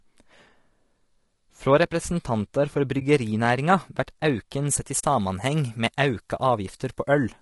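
Throughout, the speech sounds rough and grainy. Noise fills the gaps between harmonics, and the top band sounds thin and artificial. This points to low-delay AAC compression, likely AAC-ELD at a low rate near 32 kbps. At that low bitrate it leaves too few bits.

Right after "representantar for", from 2.99 to 3.02 s, the sound fades into a brief dip and fades back. This is AAC frame loss with muting. About 20 ms of audio, roughly one frame, was lost and replaced with silence. The overlapping windows smooth the edges.

From 4.70 s to the end, the treble is too strong. The sound turns bright, thin and sibilant. This is pre-emphasis left on. The high frequencies were boosted, which fits a CD 50/15 µs curve, and the matching cut never followed. The boost is about 8 dB at 10 kHz relative to 1 kHz.

From 4.99 to 5.04 s, a second AAC frame loss with muting leaves a longer gap. About 40 ms is missing, which fits two lost frames. 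The sound fades out and back in.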